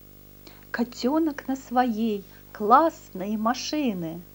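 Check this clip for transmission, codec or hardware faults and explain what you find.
A video or display buzz runs through the whole speech clip. A screen or video cable is coupling its picture timing into the audio path, so a 50 Hz field-rate buzz sits well below the speech, with hash above it and a thin, very high tone at 15.6 kHz from the line scan. Mains hum at 50 Hz has no such hash or high line tone, so that whine near 15.6 kHz points to the video circuitry, not the power supply.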